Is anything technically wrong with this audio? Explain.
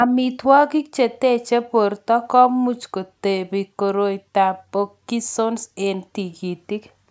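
No, the speech shows no technical faults: it has passed through a call's microphone processing, whose high-pass filter trims the lowest bass as intended, and the band stops at about 8 kHz, as that path allows.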